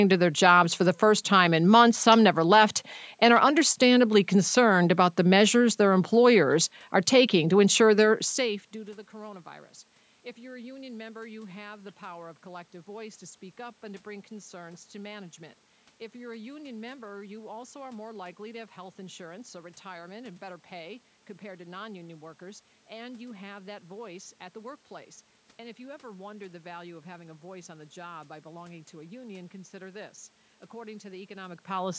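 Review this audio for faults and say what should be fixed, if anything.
Nothing here needs fixing. The sound stops at 8 kHz, as expected from call microphone processing, with room noise underneath and level shifts around 8 s and near the end as the talker moves.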